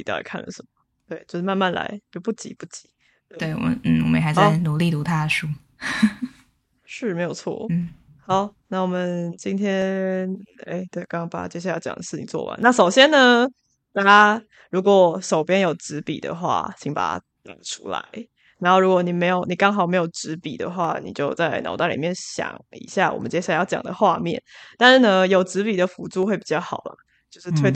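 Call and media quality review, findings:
Single sharp clicks in the speech at 9.82 s, 20.85 s and 26.23 s, likely dropped samples: a fraction of a millisecond skipped, causing a waveform jump. No audible gap, unlike a dropout.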